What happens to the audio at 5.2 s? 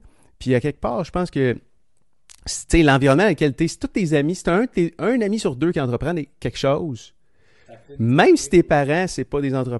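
At 5.2 s the speech carries the same coded texture it has from start to finish, likely Bluetooth LC3 compression. The codec cuts the signal into short blocks, here consistent with 10 ms frames, and spends a limited bit budget on each, which fits a 48 kbps stream. The upper spectrum is thinned and patched with filler noise, so the voice has a plainly audible breathy, grainy edge at this moment.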